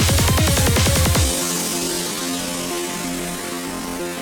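From 1.21 s to the end, the audio has a time-stretched section, slowed to about 0.6 times normal pace with pitch unchanged, so it drags. Unlike a plain slowdown, nothing drops in pitch, pointing to software that likely stretched it by repeating short pieces.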